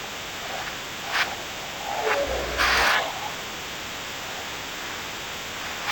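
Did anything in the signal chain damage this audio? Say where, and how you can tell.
Yes. The damage is at the sample-format stage: a stereo read as mono fault runs throughout. The speech plays at half speed and a full octave low, with a faint mirrored image in the upper spectrum, because interleaved left and right samples are read as one channel.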